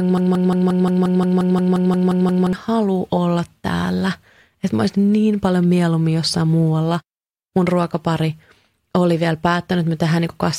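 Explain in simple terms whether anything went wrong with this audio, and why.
Something did go wrong, right at the start. The clip opens with a broken-record loop. A tiny piece of speech, about 0.18 seconds long, plays over and over with no gap between repeats. It is already repeating when the clip begins and keeps going until about 2.53 s. Normal speech then picks up with "halua olla täällä". The player or stream likely stalled and kept sending the last fragment it held. Whatever should have played in those first seconds is lost.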